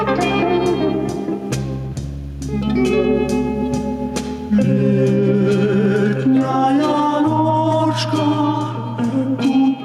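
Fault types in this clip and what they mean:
gain pumping: The level is pulled down by roughly 10 dB as each loud sound arrives, throughout the clip, so loud and soft passages sit squashed close together in level. This most likely comes from input gain set far too high with a fast limiter or compressor pulling it back. Unlike a noise gate, the sound is turned down rather than cut to silence.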